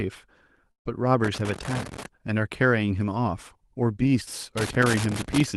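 A burst of packet loss runs from 0.71 to 0.87 s. Roughly 140 ms of audio never arrived in time, so the receiver stretched the last sound and faded it into near silence before playback resumed further along, skipping the lost stretch.

Loose connector crackle follows from 1.24 to 2.06 s and again from 4.58 to 5.45 s. A worn or dirty contact repeatedly made and broke the signal, chopping it. It is heard as irregular scratchy bursts over the speech, which itself carries the coding texture of an Opus call path limited to about 12 kHz.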